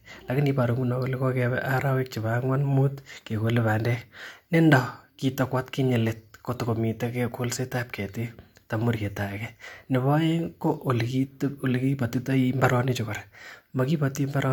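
A speech recording, with no technical faults to report. Nothing heard in it points to a problem anywhere in the recording or playback chain.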